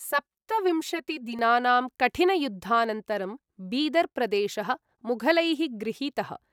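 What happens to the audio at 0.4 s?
Channel delay (comb filtering) runs from 0.0 to 1.39 s: one channel lags by about 5 ms, so the mono sum notches out regularly spaced frequencies from around 100 Hz, leaving the speech hollow and phasey.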